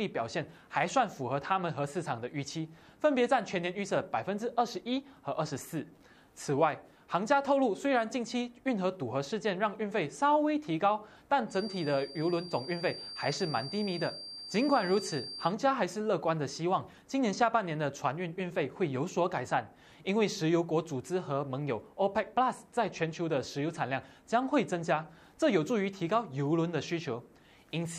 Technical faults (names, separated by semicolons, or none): feedback whistle